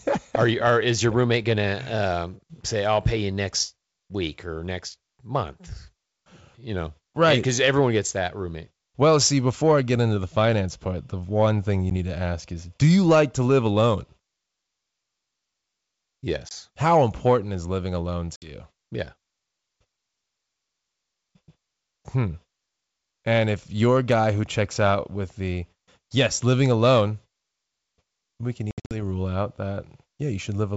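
Packet loss on an ADPCM call breaks the speech four times. A 10 ms gap at 11.90 s falls between "the one thing you" and "need to ask is". About 20 ms drops out between 16.49 and 16.52 s. A 60 ms hole follows "important is living alone" at 18.36–18.51 s. Between 28.71 and 28.95 s, after "we can" and before "rule out", about 170 ms goes missing over roughly 200 ms, in runs up to 70 ms long. Each gap is hard-edged silence. Once audio resumes, the G.722 decoder's adaptive predictor and step size no longer match the sender's, so the speech comes back slightly distorted before settling.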